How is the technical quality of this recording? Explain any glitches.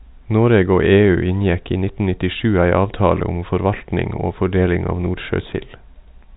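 No glitches turn up anywhere in this speech recording, which comes across with the narrow band of ordinary G.711 telephone coding, with nothing heard above about 3.8 kHz.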